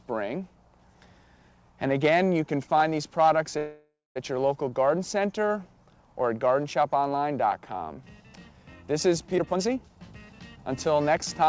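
At 3.58 s the sound stalls until about 4.18 s, a call audio freeze. The tail of what was playing gets stretched into a fading buzzy hiss, and roughly the last 0.19 s of it is plain silence. That's most likely packets held up in transit with the jitter buffer running dry. When they turn up, the audio picks up right where it left off. So nothing's lost, but about 0.58 s of gap has been inserted and everything after it runs that much later.

From 9.38 s to 11.43 s you get a jitter buffer speed-up. The receiver is working off a backlog by snipping out tiny pitch-period-sized chunks over and over, around 0.4 s in total. The pitch stays put but the sound plays at about 121% speed, so that last stretch feels rushed. There's also nothing above 8 kHz anywhere in the clip, which fits a wideband call codec like G.722.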